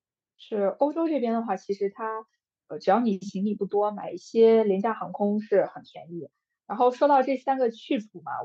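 Listening to the speech recording, nothing technically wrong stood out at any point.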